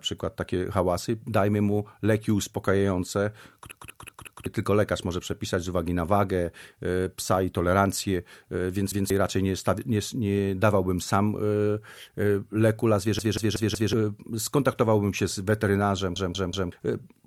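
At 3.72 to 4.46 s, 8.92 to 9.10 s, 13.19 to 13.93 s and 16.16 to 16.72 s there's a repeated buffer: audio arrived late, so one 186 ms chunk loops one to four extra times with hard joins, which fits an 8192-sample buffer.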